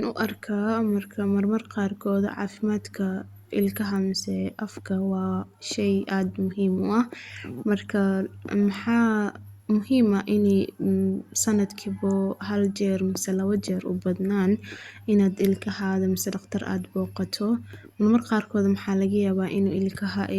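No dropouts, clicks, level jumps or other playback faults turn up anywhere in the recording.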